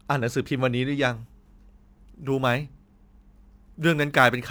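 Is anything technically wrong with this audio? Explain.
Yes. From 1.11 s to the end, sample clock jitter appears. The converter's timing wobbles by microseconds, adding hiss and roughness that grows on loud, bright speech.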